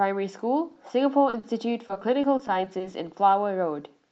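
Speech carried over an Opus call path whose audio tops out around 8 kHz, with two brief instances of short concealed packet loss, at 1.29 to 1.35 s and 1.39 to 1.45 s. In each, a few tens of milliseconds of audio never arrived and the decoder bridged the gap by extending the preceding sound, leaving a quick smear. The second event coincides with a small shift in delay. From 1.87 to 2.94 s there is repeated packet loss with a robotic sound: nine short holes, none longer than 20 ms, each patched and quickly followed by the next, so about 15% of the stretch is synthesised fill, giving a choppy texture.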